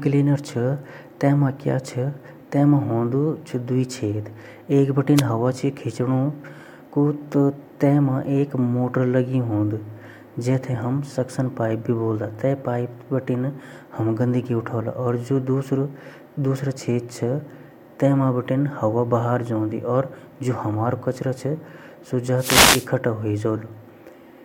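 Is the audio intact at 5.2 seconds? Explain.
No. From 5.15 to 5.23 s a wireless microphone noise hit briefly disturbs the speech: a radio fade lets receiver hiss surge in as a short static swish. On a spectrogram it shows as a broadband vertical smear; the waveform turns ragged and noisy.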